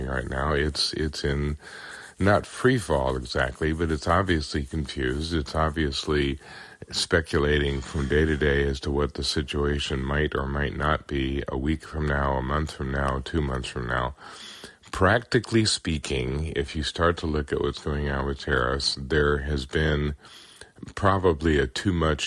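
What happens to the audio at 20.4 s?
Nothing goes wrong at 20.4 s; the audio plays through that moment intact, with no dropout, click or distortion.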